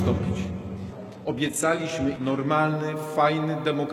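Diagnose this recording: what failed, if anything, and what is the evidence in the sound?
Dull, artefact-heavy sound until 2.5 s, then a sudden gapless improvement: an adaptive stream starting at a low bitrate at playback, suggesting 16 kbit/s HE-AAC stepping up to 96 kbit/s AAC-LC.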